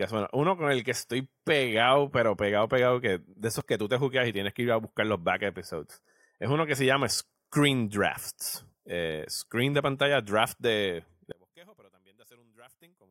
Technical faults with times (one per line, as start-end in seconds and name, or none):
3.60 dropped buffer (overrun)
11.32-13.10 one channel inverted